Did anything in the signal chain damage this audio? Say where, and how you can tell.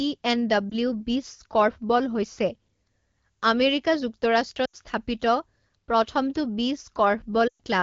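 Yes. The damage comes from the radio link, as lost AMR speech frames, heard through an AMR-WB decoder at what sounds like 12.65 kbit/s. At 0.70 to 0.74 s there is a brief warble, consistent with one missing 20 ms frame. At 4.65 to 4.76 s about 80 ms is lost and the sound drops to near silence within two frames. At 7.47 to 7.60 s a 120 ms run drops to near silence within two frames and returns weak or rough. Each time, the decoder concealed corrupted frames by repeating the last good pitch and vocal tract settings at falling gain.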